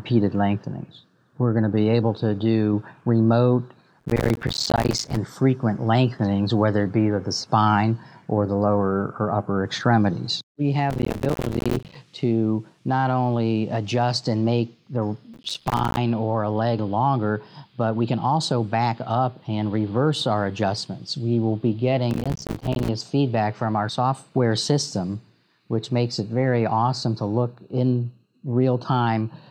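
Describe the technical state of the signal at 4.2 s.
At 4.2 s the sound is torn by a dense, gritty crackle that runs from 4.00 to 5.17 s. This is processor overload crackle: the system repeatedly missed its deadlines for buffers of around 5 ms, roughly a hundred times, and each miss left a brief hard-edged dropout of silence.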